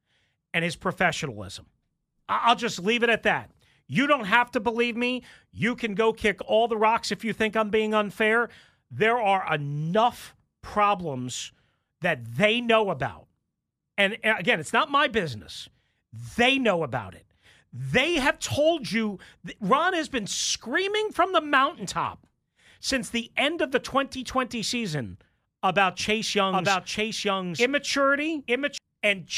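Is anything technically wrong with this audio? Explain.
Yes. A doubled audio track runs from 26.00 to 28.78 s. The speech is likely being picked up a second time through a slower path, or an edit has left two copies out of step. A full-band copy trails the original by about a second at roughly the same level, with no decay or room colour, so every phrase is restated a second later over the next one, and the echo cuts in and drops out abruptly.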